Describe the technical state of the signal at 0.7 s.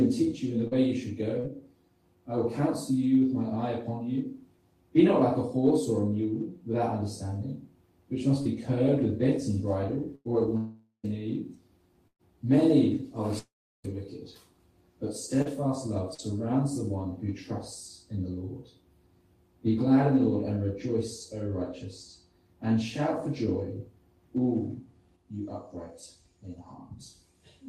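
Around 0.7 s the signal shows short concealed packet loss, from 0.67 to 0.74 s. About 40 ms of audio never reached the decoder in time, and the receiver improvised roughly 39 ms to cover it. It extended the preceding sound's pitch, or shaped noise if that sound was unpitched, then crossfaded back into real audio. The result is a brief smear or wobble rather than a silence. Unlike an error-correction rebuild, this section is invented, so short transient detail there can disappear entirely.

Inside that window, from 0.71 to 0.73 s, is a lost packet rebuilt from error correction. The packet following it carried a low-bitrate duplicate, which filled about 20 ms. This stretch is a coarse copy of the actual audio, not a guess, so it keeps the real shape of the sound while turning grainier and noisier. The contrast with the concealed portion around it is fidelity: degraded texture instead of fabricated continuation.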